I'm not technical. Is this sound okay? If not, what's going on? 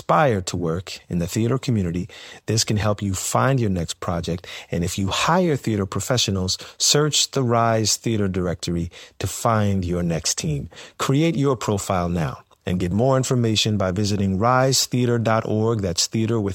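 Yes, there are no faults to report in this speech recording.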